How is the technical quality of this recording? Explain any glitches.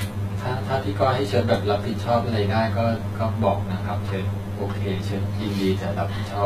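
The recording is compromised in two ways, both present from start to finish.

The speech sounds hollow and phasey throughout, as if heard down a tube. This is channel delay causing comb filtering: one channel arrives roughly 10 ms behind the other, and when the two are summed to mono, the shared content cancels at evenly spaced frequencies. The first notch falls around 50 Hz, with further notches about every 100 Hz above it, carving a fixed, dense pattern of gaps through the whole voice.

Across the whole clip the treble also has a gritty, metallic edge, with s sounds lispy and smeared, and nothing at all above 14.9 kHz. This points to HE-AAC compression, likely at a very low bitrate in the region of 20 kbps. The codec keeps only the lower spectrum and rebuilds the highs by copying lower bands upward under a coarse envelope. The treble stays bright but is synthetic, and its harmonics fail to line up with the real ones below the crossover, which is what gives the damage its plainly audible metallic character.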